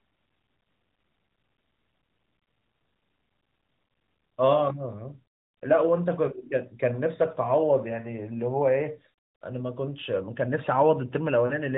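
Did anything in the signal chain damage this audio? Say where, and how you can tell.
Yes, at the network stage: there are lost AMR speech frames from 11.46 to 11.53 s, about 40 ms, which fits two consecutive 20 ms frames corrupted over the radio link. The AMR-NB decoder, running at 12.2 kbps with only light coding damage, covered the gap by repeating the last good pitch and vocal tract settings at falling gain. That is why the speech there briefly smears and drops in level rather than clicking or cutting out cleanly.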